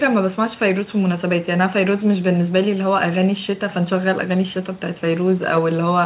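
No technical faults are audible in this speech clip.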